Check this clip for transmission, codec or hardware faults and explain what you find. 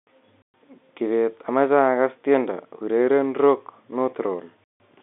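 One fault is present: packet loss filled with silence, at two points. The speech drops out abruptly from 0.42 to 0.54 s, a 120 ms hole, and again from 4.64 to 4.80 s, a 160 ms hole. Packets went missing in transit, and the receiver played silence in their place, which leaves hard-edged holes. Both lengths are multiples of 20 ms, which fits 20 ms packets. The narrow telephone band comes from the G.711 coding and is expected.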